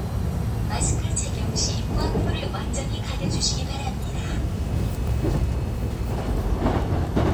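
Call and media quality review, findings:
Damaged data in a compressed stream at 4.03 s: corrupt bytes in the encoded frames, decoder misreads them, loses sync and jumps to the next frame header. Heard as a brief glitch in the sound.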